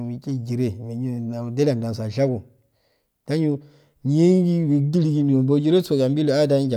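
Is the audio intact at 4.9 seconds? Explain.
Yes, the audio is intact at 4.9 seconds, with no audible fault at that moment.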